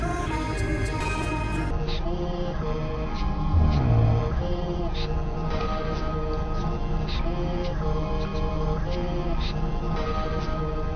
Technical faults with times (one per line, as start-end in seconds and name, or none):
1.71-10.95 wrong sample rate